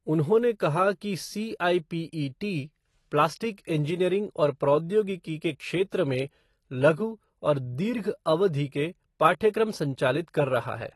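From start to finish the speech has a hard ceiling: nothing comes through above 12 kHz, so the top end sounds shaved off and dull. On top of that there's a plainly audible smeary, warbly texture, most noticeable on sibilants and held sounds. That combination is the signature of AAC compression, likely AAC-LC squeezed down to a low rate, and the damage is consistent with something around 32 kbps, where the encoder drops the high band and coarsens what's left.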